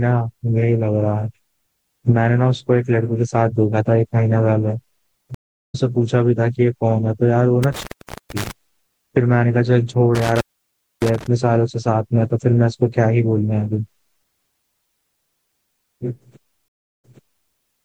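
It's a speech clip with two kinds of dropout. There are two stream reconnects, where the connection broke and the player restarted its decoder mid-stream. At 5.35–5.75 s it goes silent for about 0.39 s and picks up roughly a fifth of a second further on, so a bit is skipped. At 16.68–17.50 s there's a 0.35 s gap, and then it resumes 0.47 s earlier, repeating that stretch. There are also two bursts of intermittent contact, a loose cable or plug briefly opening the line. At 7.63–8.51 s and 10.15–11.27 s the sound cuts out for 0.45 s and 0.61 s, crackling at the edges and leaving faint hiss while the line is open.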